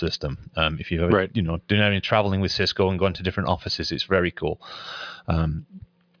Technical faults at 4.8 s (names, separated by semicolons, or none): none